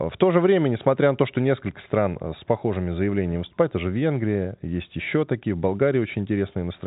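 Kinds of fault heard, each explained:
No kinds of fault are heard in this speech clip.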